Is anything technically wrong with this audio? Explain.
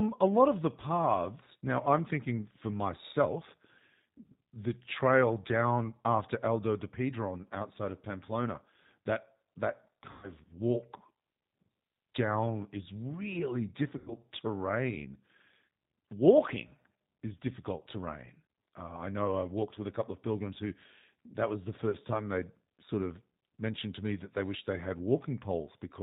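Yes. Throughout, the speech carries G.729 codec coloration. The sound is thin, slightly rough and synthetic, consistent with an 8 kbit/s G.729A stream rebuilding speech from a filter, pitch predictor and sparse pulses. On a spectrogram, energy stops sharply at 4 kHz.

VoIP packet loss concealed by the speech codec occurs at 10.11–10.33 s (120 ms lost, which fits four packets), 13.98–14.15 s (90 ms, three packets) and 21.90–21.97 s (30 ms, one packet). The decoder extrapolates from its last pitch and filter while lowering the gain, so the speech is stretched into a fading, buzzy or noisy sound. The waveform shows a decaying stretch.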